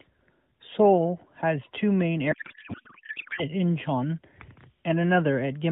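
From 2.32 to 3.44 s a codec payload misread turns the speech into garbled warbling noise, consistent with octet-aligned AMR frames being decoded as bandwidth-efficient, shifting every field.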